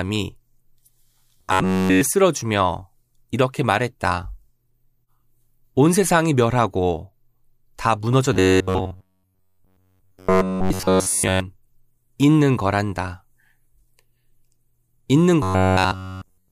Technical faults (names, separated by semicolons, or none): robotic sound from repeated short buffers